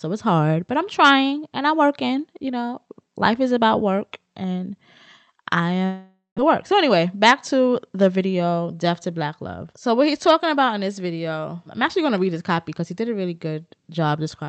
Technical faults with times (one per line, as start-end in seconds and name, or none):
5.85-6.40 long network dropout
6.49-8.33 jitter buffer speed-up